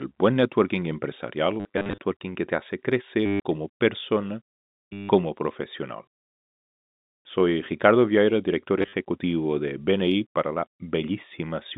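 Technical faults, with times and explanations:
1.6–1.98 s (just before "que te hace"), 3.26–3.4 s (between "que te hace" and "como persona"), 4.93–5.09 s (just after "como persona") and 8.79–8.93 s: packet loss with last packet repeated. Missing packets were filled by replaying the previous one. The runs give a robotic stutter buzzing near 100 Hz, which fits 10 ms packets.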